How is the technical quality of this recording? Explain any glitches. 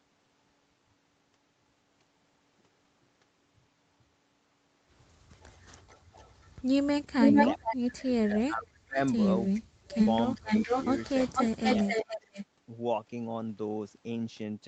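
The recording is speech passed through a call chain, band-limited to 8 kHz as a call codec would leave it, and it has two recurring glitches.

Echo leak at 5.41–6.62 s, 7.2–7.76 s and 9.92–12.45 s: a delayed copy of the speech returns about 436–467 ms late. It is faint at first (about −30 dB), then about as loud as the speech. It likely comes from a far-end speakerphone whose canceller let echo through. On a spectrogram it looks like a ghost copy of the harmonics, offset in time.

Speech suppressed in double talk at 7.46–8.99 s, 9.51–9.95 s, 10.43–10.74 s and 11.29–12.36 s: the speech dips by up to about 40 dB or drops out in pieces. This is likely because the canceller ducked both talkers while they overlapped. On the waveform the envelope is notched; on the spectrogram there are gaps.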